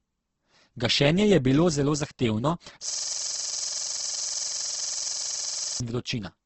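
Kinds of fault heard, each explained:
Opus compression: Across the whole clip the speech sounds rough and grainy. It was likely encoded with Opus at a low rate around 12 kbps in its CELT music mode. The encoder keeps each band's energy but runs short of bits, so it fills band detail with folded copies of lower bands or with noise. The result is coarse texture rather than swirling holes. Nothing is present above about 8.2 kHz, so the top end is cut to wideband.
System hang loop: From 2.9 to 5.8 s the computer or its audio driver stalled while the sound hardware kept replaying the same ring buffer. A single 46.44 ms slice of audio repeats exactly, over and over, at a rate of 21.5 Hz. That is fast enough to fuse into a buzzing, machine-gun-like stutter in place of the speech. The loop length fits a 2048-sample buffer.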